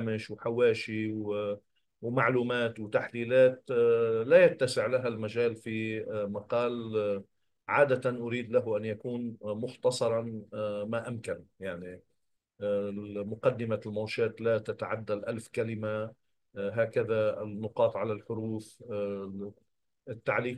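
Nothing in the sound here calls for comment, since there's no technical fault to pick out anywhere along the way.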